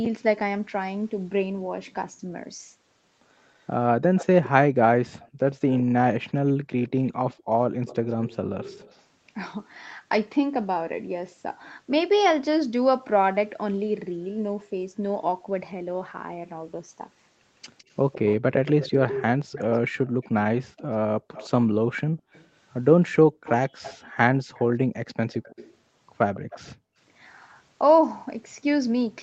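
Speech with an echo leak at 3.48–5.83, 6.83–9.04, 17.78–22.47 and 23.44–26.75 s. A copy of the talker returns a steady 160 ms late, roughly 10 to 20 dB down, loudest in the third stretch. The likely cause is a far-end loudspeaker whose echo canceller let some of its microphone pickup through. The fixed delay and the separate repeat set it apart from room reverberation, which smears into the sound instead. The background is also gated by the echo canceller, briefly, at 5.28–5.94, 7.37–7.82 and 26.76–26.97 s, and for about a second in total across 20.0–24.17 s. The room tone falls by about 38 to 40 dB and then recovers. Because these dips cluster around the echoed passages and take out only the background, they are distinct from packet-loss dropouts, which cut everything. The call path's 8 kHz Opus bandwidth also shows as missing top end.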